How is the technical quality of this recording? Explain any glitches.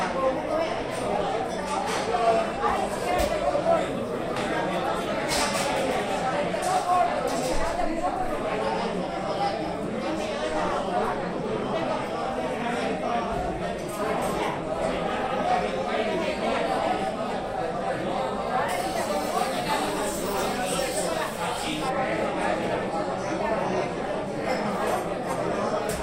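One fault affects the recording. From 18.69 to 21.89 s, pre-emphasis is left on. The treble boost of an FM 75 µs curve was applied without the matching de-emphasis. Highs sit about 13 dB hotter at 10 kHz than at 1 kHz. The sound turns thin, bright and hissy.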